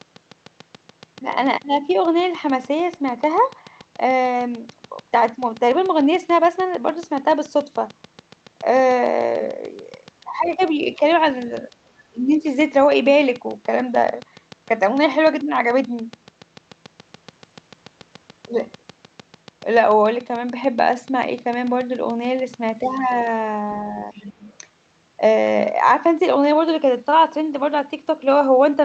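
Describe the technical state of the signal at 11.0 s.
At 11.0 s you're inside a train of clicks that runs from 0.01 s to 23.28 s: a steady, regular ticking at about 6.8 clicks per second, roughly 150 in all, with peaks reaching about the level of the speech itself. Each click has much the same shape, so it sounds like a mechanical tick laid over everything, pauses included. The likely source is interference from nearby equipment or a faulty connection or power supply.

Right on top of that there's a brief case of speech suppressed in double talk, from 10.96 s to 11.01 s, about 50 ms in total. Both ends seem to have been talking at once, and the echo canceller likely couldn't tell the local talker from the loudspeaker echo, so it pulled the level down by about 5 dB. You'd hear it as a quick dip in the voice.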